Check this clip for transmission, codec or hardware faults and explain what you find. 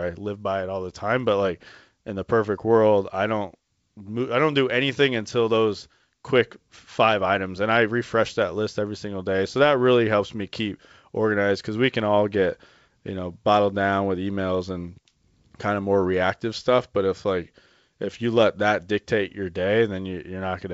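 I found no transmission, codec or hardware faults in this clip of speech carried over G.722 wideband coding at 64 kbit/s.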